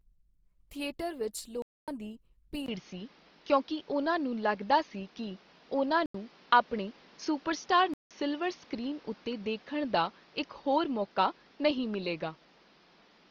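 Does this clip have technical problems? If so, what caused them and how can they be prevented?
Yes. Throughout, the speech sounds grainy and rough, with noisy-textured high frequencies, likely from Opus compression in its music (CELT) mode at about 24 kbps. A spectrogram shows full bandwidth but smeared, speckled energy in the upper bands. Encoding at a higher bitrate prevents this.

A block of digital silence cuts the audio three times: 1.62 to 1.88 s (256 ms) just after "ਥੀਏਟਰ ਵਿੱਚ", 6.06 to 6.14 s (85 ms), and 7.94 to 8.11 s (171 ms). The waveform drops to a flat line with abrupt edges, which fits output buffers of roughly 4096 and 8192 samples going unfilled in time. Larger buffers or a less loaded processing thread would prevent these gaps.

From 2.66 s the input switched to a poorer device, likely another microphone or a headset call profile, after a brief 20 ms silence. The sound turns duller and a few decibels different in level, with new background noise roughly 30 dB below the speech. 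On a spectrogram everything above 6.3 kHz vanishes from that point onward. Locking the input device for the whole recording prevents this.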